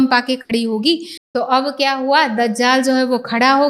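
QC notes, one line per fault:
0.41–0.51 s, burst of packet loss. The sound is extended and faded for about 80 ms, becoming a decaying buzz or hiss. Audio then picks up further along. Roughly 80 ms of the original is skipped, so the flow jumps forward.
1.17–1.35 s, playback stall. The output drops to silence for about 172 ms in mid-flow, then carries on. The cause is likely the player running short of data or its thread being blocked, leaving nothing to output until recovery.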